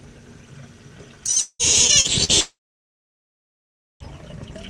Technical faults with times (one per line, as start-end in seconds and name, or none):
1.31-2.31 repeated packet loss (robotic sound)
2.40-4.03 long network dropout